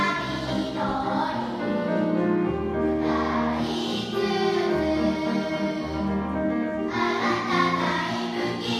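No technical faults can be heard anywhere in the audio.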